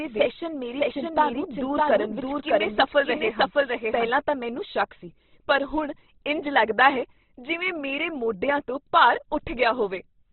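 From the start until 4.1 s, the speech plays twice. A doubled audio track trails the original by roughly 0.7 s, at about the same level. It has no room colour. It stops abruptly at 4.1 s. A second copy from a slower capture path is the likely cause.

Throughout, the speech is noisy, rough and grainy. Nothing remains above 4.2 kHz. This is heavy Opus compression. The narrow bandwidth and rough texture fit a very low bitrate near 12 kbps, likely with the encoder in its CELT music mode.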